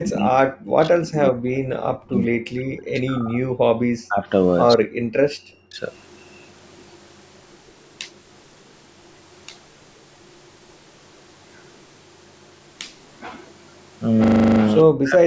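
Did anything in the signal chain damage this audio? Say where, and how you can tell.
Yes. The speech drops out repeatedly in a way that points to call processing, most likely speech suppressed in double talk in the echo canceller. The talker is pushed down by about 40 dB from 0.0 to 3.48 s, again at 4.06–4.27, 4.76–4.96 and 5.65–5.81 s, and once more from 14.84 s to the end. With both sides active, the canceller treated this talker as echo and attenuated it. On a waveform these show as sudden hollows in the envelope. A spectrogram shows the harmonics fading out of the speech band, which tops out at 8 kHz.

Background gated by the echo canceller sits in the same call-processing stage at 5.24–5.37 s. The room tone collapses by about 39 dB for roughly a tenth of a second and then returns. While far-end audio was playing, the suppressor clamped the microphone hard and then released it. The waveform shows a brief flat gap in the noise floor, and the spectrogram shows a short vertical band where the background texture goes empty.

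An echo leak runs from 5.92 to 12.93 s, likely from a far end whose loudspeaker was picked up by its own microphone and not fully cancelled. A faint copy of the speech trails the original by about 150 ms, sitting roughly 35 dB below it. A spectrogram shows a dim ghost of each syllable's harmonic pattern shifted right by that delay. The waveform shows only a slight smearing at phrase ends.

A system hang loop at the driver or buffer stage appears at 14.24–14.6 s. One 40 ms slice of audio repeats nine times at 25 Hz, which fits the hardware cycling a 40 ms buffer while the host stalled. This produces a rapid, rhythmic stutter. The waveform shows identical blocks tiled end to end. The spectrogram shows a frozen spectral column repeated in evenly spaced stripes, with faint vertical lines at every loop seam.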